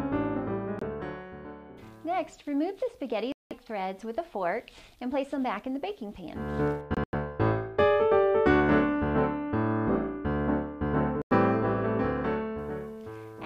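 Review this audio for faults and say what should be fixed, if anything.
Bluetooth dropout, likely, at 0.79 to 0.83 s, 3.32 to 3.53 s, 6.95 to 7.14 s and 11.22 to 11.33 s. The sound cuts to silence and then resumes as though it had kept playing. The lost stretches run about 23, 186, 116 and 93 ms, and they fit whole packets of roughly 23 ms each that missed their deadline. The third event is broken into two holes spread over about 186 ms, the longest lasting 93 ms. To prevent it, keep the headphones close with a clear path and reduce 2.4 GHz interference, or record through a wired connection.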